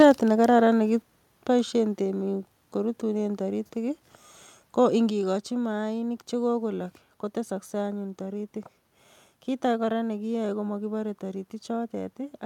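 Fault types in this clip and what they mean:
microphone overload: In the opening 0.05 s the loudest peaks are flattened, overshooting the converter limit by about 4 dB, with around a tenth of samples clipped. This causes a harsh crackle. On the waveform the tops look squared off, and the spectrogram shows broadband vertical smears. The likely cause is input gain set too high.
microphone volume stepped down: The whole level, sound and background together, drops abruptly by about 3 dB at 0.02 s, about 4 dB at 1.02 s, and about 3 dB at 5.1 s, just before "maanik che kogolok". The waveform envelope steps down, and the spectrogram dims evenly across frequencies. This is likely software reducing input gain after clipping.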